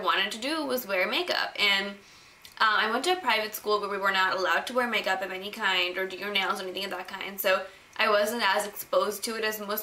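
No technical faults can be heard anywhere in the audio; the signal stays continuous and steady throughout.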